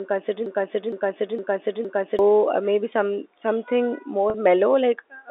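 From 0.46 to 2.19 s, a 0.46-second fragment of speech plays four times back to back, a broken-record loop. The player or stream most likely stalled and kept resending the last fragment it held, so the speech meant for that stretch is lost.

At 4.30 to 4.34 s, the voice briefly holds a slightly buzzy tone before continuing. This is packet loss with pitch repetition: 40 ms went missing, which fits two lost 20 ms packets, and the receiver filled the gap by repeating the last pitch period, heard through a 300 Hz to 3.7 kHz telephone band.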